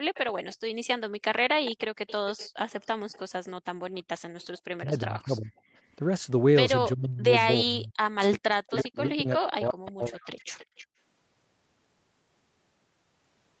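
Right at the start, 0.03 to 0.14 s, the room sound is pulled down hard, about 39 dB at its deepest, for roughly a tenth of a second. That's background gated by the echo canceller: with the far end's loudspeaker active, the canceller clamps the mic, so the ambience vanishes and then snaps back. The same dip returns at 10.87 to 10.98 s, as the last stretch of echo ends.

Between those two gates there's echo leak. From 0.14 to 0.56 s a faint delayed copy trails the talker by 338 ms, about 20 dB under the speech. It comes back louder from 1.65 to 4.6 s at 366 ms delay and about 15 dB down, blips for an instant at 5.56 s (366 ms, about 35 dB down), then returns from 8.76 to 10.87 s at 318 ms and about 15 dB down. The likely story is a speakerphone whose canceller didn't fully scrub what its mic picked up, so some got sent back as that lagging ghost.

Then there's speech suppressed in double talk. 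From 4.84 to 5.52 s the talker dips by around 25 dB for about half a second in total. From 6.95 to 10.35 s it's worse: drops near 40 dB, adding up to around two seconds of chopped-out or thinned voice. Likely both ends talking at once, with the canceller unable to tell its own talker from the loudspeaker echo and ducking everything.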